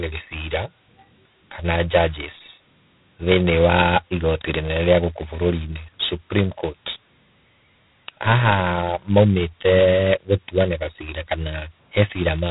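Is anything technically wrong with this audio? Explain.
Yes. Throughout the speech a harsh, rasping hiss rides on every syllable, rising and falling with the level, and nothing above about 3.8 kHz survives. This is heavy G.726 ADPCM damage: each sample keeps only a couple of bits of prediction error, which fits 16 kbit/s.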